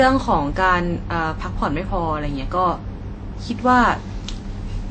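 Throughout, the speech stops at 8.5 kHz. Two kinds of compression artefact clash. This likely comes from transcoding between lossy codecs, AAC then WMA.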